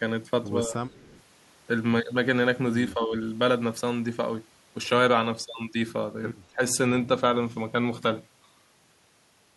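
Speech in which the voice briefly sinks three times, at 0.67 to 0.82 s, 2.94 to 3.14 s and 6.51 to 6.61 s, falling by as much as 15 dB or so. This is likely speech suppressed in double talk: with both ends talking, the echo canceller turned down the near voice along with the loudspeaker echo. From 0.89 to 1.22 s a very faint delayed copy of the voice trails about 199 ms behind, roughly 30 dB below the speech, likely an echo leak where a loudspeaker's echo canceller let some of its microphone pickup back into the call.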